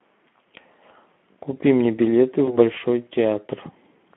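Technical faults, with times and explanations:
Throughout, Speex codec: the speech was coded by a low-bitrate CELP codec, around 11 kbps, over a 200 Hz to 3.4 kHz telephone band, so the excitation is starved of bits. The speech comes out plainly noisy and hoarse, with a thin, band-limited, rough character.
2.45 to 2.58 s, VoIP packet loss concealed by the speech codec: one 20 ms packet went missing and the decoder filled the gap by extending its last pitch and filter with falling gain. The sound smears into a brief, fading stretch, and stays weak or distorted for a short while after as the decoder recovers.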